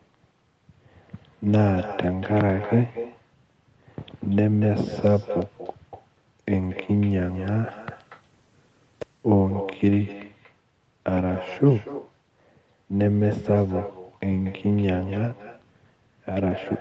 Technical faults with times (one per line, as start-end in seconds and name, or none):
0.00-16.81 echo with no canceller